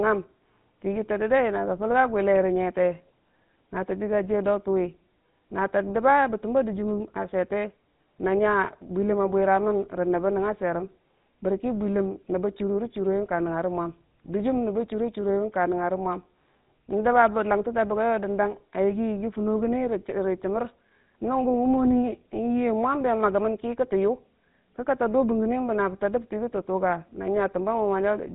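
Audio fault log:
Throughout, GSM full-rate codec: buzzy, gravelly speech with nothing above 4 kHz, from pulse-driven vocal-tract coding at 13 kbps discarding most excitation detail.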